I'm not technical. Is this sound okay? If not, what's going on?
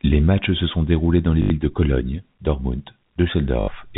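No. Twice, the connection lost small chunks of audio and the receiver filled each gap by replaying the last chunk it had. This is packet loss with last packet repeated. It causes a brief robotic stutter lasting 80 ms, at 1.42 s just after "sont déroulés dans les", and again at 3.6 s.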